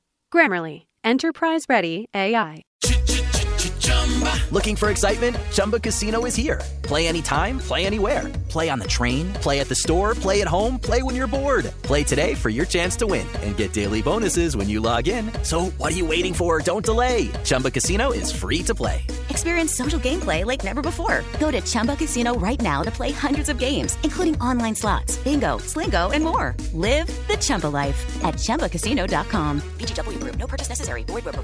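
No technical faults can be heard anywhere in the audio, and the signal stays steady and intact throughout.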